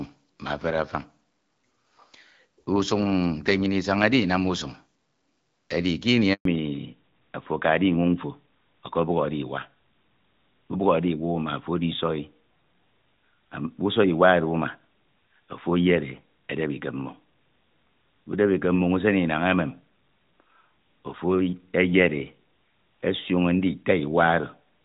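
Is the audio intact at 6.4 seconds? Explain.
No. A handover gap runs from 6.33 to 6.45 s. The call switched networks, no frames arrived for 120 ms, and the sound drops to silence. From 6.45 s, a fallback to narrowband removes everything above 4 kHz. This points to a drop from AMR-WB to AMR-NB, and the sound turns duller.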